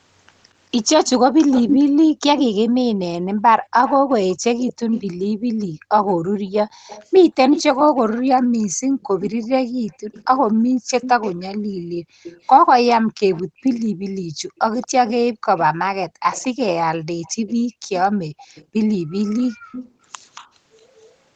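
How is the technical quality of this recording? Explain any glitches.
The recording has two recurring call faults, a trailing echo and a room tone that drops out.

Echo leak, 1.06 to 5.02 s and 6.87 to 21.15 s: a delayed copy of the voice comes back 227 ms late. It is about 5 dB below the speech at first, then about 15 dB below. It is likely loudspeaker sound that the far end's echo canceller failed to remove. The fixed lag separates it from room reverb.

Background gated by the echo canceller, 3.26 to 3.7 s, 5.32 to 6.87 s and 8.68 to 19.72 s: the canceller ducked the microphone by up to 40 dB. The room tone vanishes for roughly 0.2 s, 1 s and 4 s in total.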